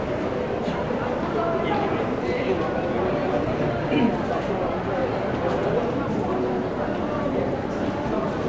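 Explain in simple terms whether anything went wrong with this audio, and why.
Nothing went wrong with this recording of sounds. There is no moment where a problem can be heard, so there is nothing to point to or explain.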